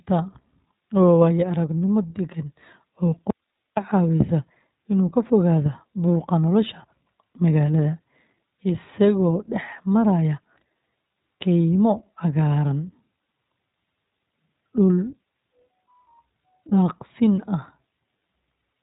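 From start to finish the speech has passed through the iLBC codec, a narrowband VoIP coder that models each short frame on its own; the damage fits its 20 ms, 15.2 kbps mode. Nothing survives above 3.8 kHz, leaving the speech muffled, slightly rough and plainly synthetic.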